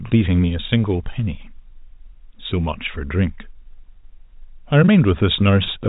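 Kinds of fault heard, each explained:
No faults can be heard in this speech. It has the narrow sound of G.711 telephone coding, with nothing above about 3.8 kHz.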